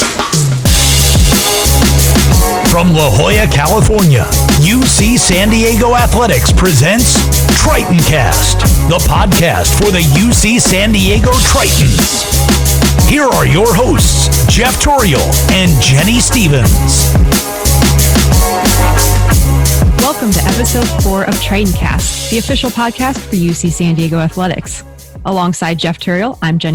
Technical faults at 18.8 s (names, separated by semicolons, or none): hard clipping